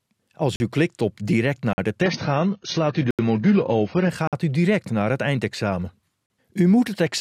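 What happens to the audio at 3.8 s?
At 3.8 s the audio is inside a stretch of adaptive stream at a lower bitrate, from 2.01 to 4.09 s. The slowed connection forces a lower-bitrate version, which points to roughly 16 kbit/s AAC: codec artefacts rise and nothing remains above 6.6 kHz. Unlike a dropout, quality switches abruptly with no gap.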